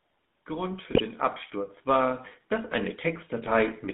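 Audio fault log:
Throughout: GSM full-rate codec. The speech has a buzzy, gravelly roughness from regularly spaced pulse excitation that keeps only every third sample, which fits the 13 kbps full-rate codec. On a spectrogram, energy sits between 150 Hz and 3.6 kHz, with nothing above.
0.47 to 3.85 s: automatic gain rising. Gain control judged the input too quiet and raised its gain by about 9 dB over these three-plus seconds, so voice and background swell together. The waveform envelope widens steadily, and the spectrogram darkens evenly across all frequencies.
0.92 to 1.01 s and 3.44 to 3.49 s: GSM bit errors. Flipped bits reached the decoder and corrupted its filter, pitch or gain values, breaking the voice into squawks, pops and gargling. This fits a few damaged 20 ms frames. Short smeared bursts and level spikes stand out against the surrounding speech.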